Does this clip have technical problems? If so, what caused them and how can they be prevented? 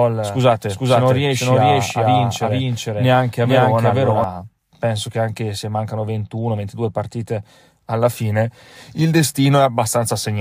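Yes. A doubled audio track runs from the very start until 4.24 s. A second copy of the speech trails the first by about half a second. It is roughly as loud as the original. It is clean and full-band, with no decay or room colour. At 4.24 s it stops abruptly. The likely cause is the same signal being captured twice, once through a slower path. Route each source through only one capture path and monitor for duplicate inputs before recording.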